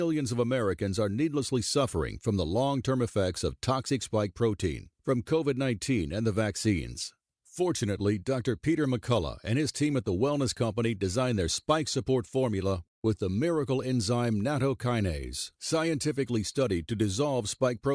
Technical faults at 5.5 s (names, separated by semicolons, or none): none